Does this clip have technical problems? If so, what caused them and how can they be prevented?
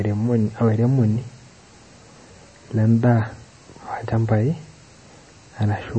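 Yes. The likely cause is MP3 compression at a starved bitrate, around 30 kbps. The encoder removes everything above 8.3 kHz and drops weak frequency lines between frames, so the speech sounds dull, watery and swirly throughout. Encoding at a higher bitrate prevents this.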